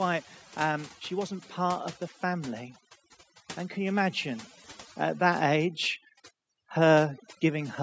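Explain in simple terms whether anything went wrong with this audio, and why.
Throughout the recording, the background drops and breaks up into twinkling specks. That's overdone noise removal: a noise reduction tool set too strong cut frequency bands near its idea of the noise, taking quieter parts of the voice along.

From about 3.74 to 5.83 seconds, the voice and the background swell together, growing gently louder over roughly two seconds. That's automatic gain rising: the automatic gain control judged the sound too quiet and slowly raised its level.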